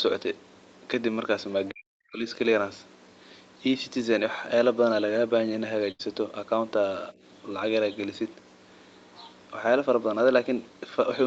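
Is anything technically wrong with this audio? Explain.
Yes, three faults are audible in this speech.

From 1.71 to 2.26 s, speech is suppressed in double talk. The echo canceller likely mistook both talkers for echo and ducked the voice, about 40 dB at its deepest, for roughly half a second.

From 5.91 to 6.01 s, a burst of packet loss drops about 80 ms. The receiver stretches the last sound for 77 ms, fading it, before speech resumes further on.

From 9.15 to 9.31 s, the other side's voice leaks through. Residual loudspeaker echo, likely missed by the canceller, comes through faintly, roughly 25 dB below the talker.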